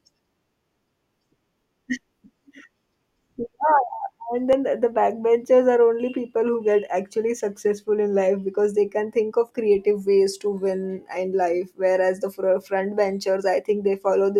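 At 4.53 s the speech skips forward, losing roughly 20 ms, with the two sides joined directly. This is audio missing between chunks, likely lost while a recorder switched between 5-second chunks. The waveform shows an abrupt discontinuity; the spectrogram shows a sharp vertical seam.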